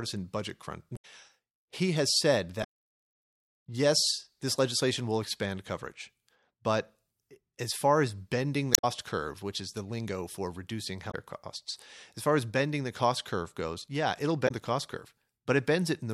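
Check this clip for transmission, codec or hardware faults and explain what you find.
There's one problem here: damaged data in the compressed stream, hitting the speech five times: 0.93–1.05 s, 2.60–2.65 s, 8.71–8.85 s, 11.07–11.14 s and 14.44–14.51 s. Each is a brief glitch, at most about 130 ms long. Corrupted bytes in those frames throw the decoder off, so it produces garbage for a moment, loses sync, and has to hunt for the next valid frame header before things settle.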